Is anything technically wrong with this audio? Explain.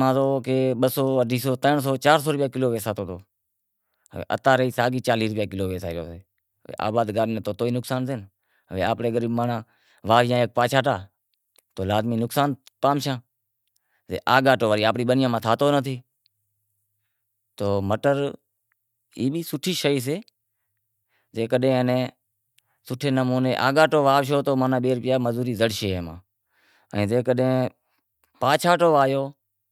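No, there's nothing technically wrong with this speech recording that I can hear; it all sounds just as it should.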